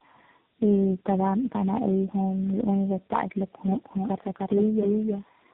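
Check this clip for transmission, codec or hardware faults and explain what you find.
Two faults are present.

Tandem speech coding runs through the whole clip. The sound crossed several narrowband codecs, each recoding the last one's damaged output. Nothing reaches above 3.8 kHz. The result is rough, muffled and warbly, which points to several speech coders in a row, AMR-NB among them.

A doubled audio track runs from 3.67 s to the end. A second copy trails by about a third of a second, at roughly equal level. It cuts in abruptly, with no decay or room colour. A slower second capture path is the likely cause.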